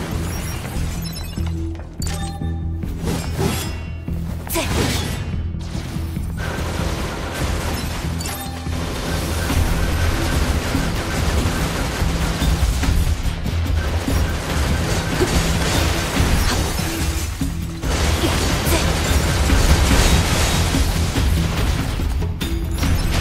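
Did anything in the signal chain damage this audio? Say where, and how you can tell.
Yes. A doubled audio track runs from 19.68 to 21.74 s: a second full-band copy of the sound trails the original by roughly 400 ms at about the same level, with no decay or room colouring, and it starts and stops abruptly at those times. That points to the likely cause being a slower duplicate capture path mixed in alongside the main one, or an edit that briefly holds two out-of-step copies of the same material.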